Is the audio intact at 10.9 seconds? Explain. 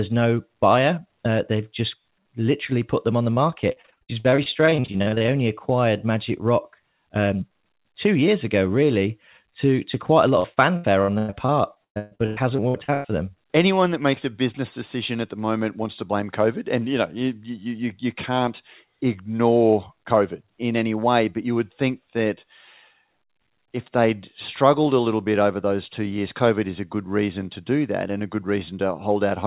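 No. At 10.9 seconds the speech sounds choppy, with small pieces missing. This is repeated packet loss (robotic sound), running from about 10.40 to 13.06 s. Packets kept going missing or arriving late, and each hole was bridged by stretching the last bit of sound before the next hole arrived. Over this stretch the short gaps come one after another, the longest about 136 ms, and roughly a third of the span is patched sound. The whole call is also capped at 4 kHz by the G.711 A-law path.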